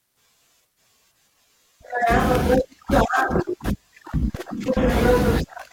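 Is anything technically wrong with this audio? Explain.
Yes. At 2.35 s an electrical switching spike cuts across the speech as a sharp snap peaking around -10 dBFS. The likely cause is a brief arc from a nearby switch, motor or static discharge, induced into the audio line and added on top of the signal.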